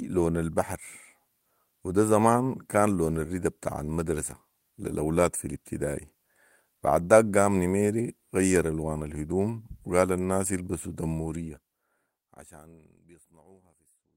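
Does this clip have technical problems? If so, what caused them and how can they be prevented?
No technical faults are present.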